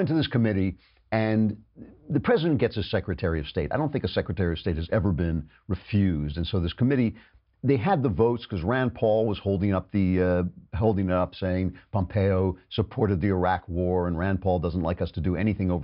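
No technical faults can be heard anywhere in the speech recording; the signal holds steady throughout.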